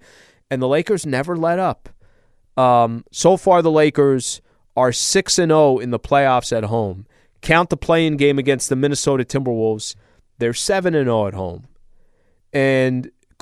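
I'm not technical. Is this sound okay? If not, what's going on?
Yes, nothing in the recording points to a technical problem; the sound stays steady and intact the whole way.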